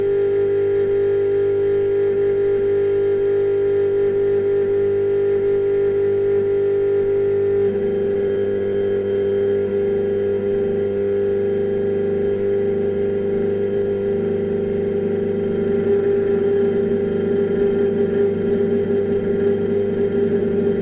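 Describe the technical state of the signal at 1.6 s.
At 1.6 s the signal is intact, with no dropout, click or distortion, and the sound is band-limited with nothing above 4 kHz, as expected from a narrowband call path such as G.711.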